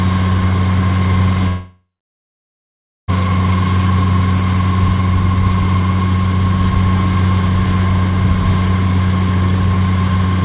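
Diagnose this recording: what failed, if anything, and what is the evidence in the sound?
Network stage, likely a long network dropout: from 1.48 s to 3.10 s about 1.6 s of audio never arrives. Concealment stretches the last sound into a fading buzz, then roughly 1.2 s of silence, and the audio resumes with that stretch gone, band-limited below 4 kHz by the G.711 call codec.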